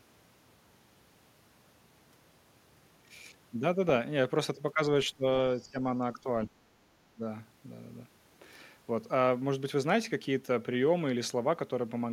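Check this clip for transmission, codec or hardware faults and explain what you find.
The speech drops out three times in quick succession: a slight dip at 5.6 to 5.83 s, then deep, near-total cuts at 6.46 to 6.71 s and 7.1 to 7.23 s. This is most likely speech suppressed in double talk, where an echo canceller mistook the talker for loudspeaker echo and attenuated it.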